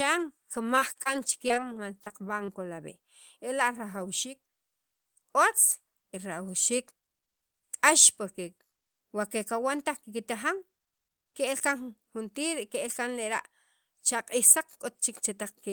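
From 0.75 to 1.17 s, and again from 1.48 to 2.50 s, the speech breaks up with repeated packet loss, giving a choppy, robotic sound. Lost or late audio was patched by stretching the preceding sound over each hole, the longest only about 24 ms. In the first stretch about a quarter of the time is patched-over sound. On a spectrogram these show as short, smeared, frozen-looking slices and brief dropouts breaking the harmonic bands.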